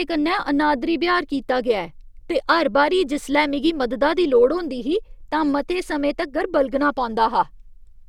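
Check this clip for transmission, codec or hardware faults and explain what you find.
There's one fault, and it runs through the whole clip: periodic clock jitter. Something's wobbling the converter clock at around 100 Hz, so each component picks up sidebands at that spacing, worse up high. The speech gets a rough, metallic edge that drops away in pauses.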